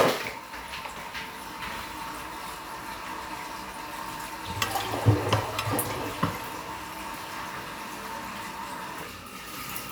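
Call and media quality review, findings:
No defects found in the everyday sound recording. Nothing to escalate; ticket can close.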